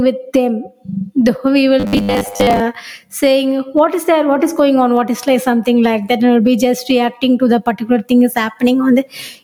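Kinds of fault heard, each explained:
Gain pumping: The level swings by around 10 dB, with loud and soft parts pulled closer in level, likely from overdriven gain and a fast limiter; the waveform envelope looks flattened.
Robotic sound from repeated short buffers: From 1.80 to 2.60 s the speech becomes a rigid 100 Hz buzz, likely from repeating 10 ms buffers over most of the audio, shown as evenly spaced spectrogram harmonics.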